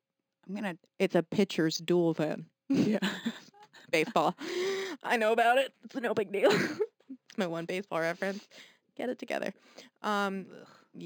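Imaging from linear upsampling runs throughout the speech. The rate was raised by straight-line interpolation, which fits a conversion from 11 kHz to 44.1 kHz. This dulls the top of the band and leaves a mirrored copy between 5.5 and 11 kHz, roughly 25 dB down, heard as a faint metallic shimmer on sibilants.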